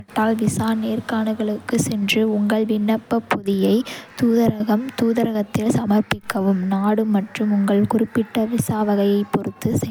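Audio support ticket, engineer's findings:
Generation loss across the whole speech clip. Swirly, hollow texture; consonant attacks smeared. Likely cause: repeated MP3 re-encoding, consistent with around three passes at 128 kbit/s, each pass requantising on a shifted frame grid so holes and noise stack. Differs from a single low-bitrate encode: bandwidth stays wide, content up to about 20.1 kHz, yet artefacts are heavier than 128 kbit/s alone would produce.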